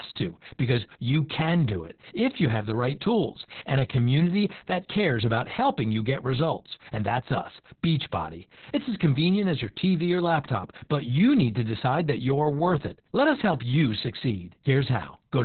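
Throughout, the speech carries heavy Opus voice compression. The linear-prediction coder runs narrowband at a bitrate that sounds like about 6 kbps, leaving nothing above 4.3 kHz. Voices sound muffled, hoarse and slightly robotic.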